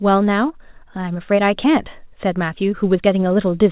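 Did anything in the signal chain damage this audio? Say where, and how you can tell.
Yes, there's a short concealed packet loss in the network stage, around 1.84 to 1.88 s. About 20 ms of this speech never arrived in time, and the receiver filled roughly 16 ms of it by carrying the last sound forward before blending back into the real signal. You hear it as a quick smear or tiny wobble in the speech. The top stops at 4 kHz, which fits a G.711 mu-law call path.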